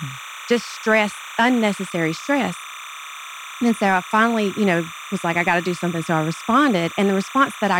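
A steady chirping warble sits behind the speech from start to finish, flipping between pitches around 1 and 2 kHz, roughly 15 dB below the voice. This is timecode bleed: a linear timecode square wave, its rhythm fitting 29.97-frame code, leaking in from a neighbouring track or cable.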